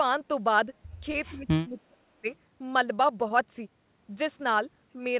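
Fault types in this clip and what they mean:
Short concealed packet loss: Twice, about 20 ms of the speech failed to arrive in time, at 1.12 s and again at 3.28 s. Each time the receiver bridged the hole by extending the preceding sound, continuing its pitch where it was voiced or shaping noise where it was not, before blending back into the real signal. The result is a brief smear or wobble of roughly 40 ms, short enough that a consonant can drop out entirely.
Speech suppressed in double talk: From about 1.29 s to 2.27 s the talker's level collapses in pieces, totalling something like 0.7 s of affected audio, with the deepest dips approaching 35 dB down. The likely cause is an echo canceller that heard both ends active at once, could not tell its near-end talker from loudspeaker echo, and attenuated everything, so the speech dips and partly cuts out.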